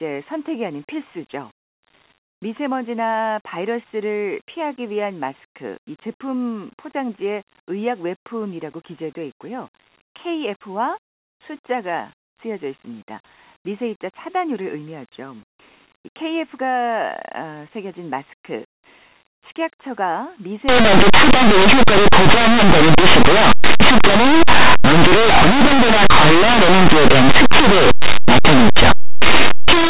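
Speech. From 20.69 s to the end at 29.89 s it turns into harsh, very loud distortion. This is linear audio read as companded. Plain 8-bit samples are being expanded as mu-law codes. Values just on one side of zero become the loudest peaks.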